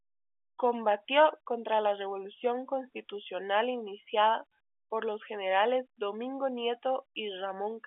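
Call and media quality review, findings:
No faults found in this call.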